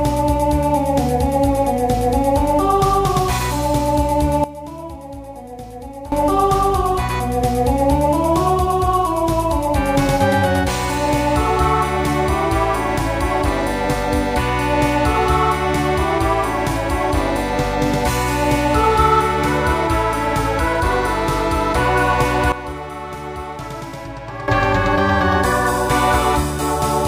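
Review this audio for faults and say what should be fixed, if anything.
Sudden gain jump at 4.44–6.12 s and 22.52–24.48 s: the sound and the noise floor drop together, by about 15 dB and then about 12 dB, likely from an unramped gain step. Apply every gain change through a short ramp or smoothing filter rather than switching it on a single sample.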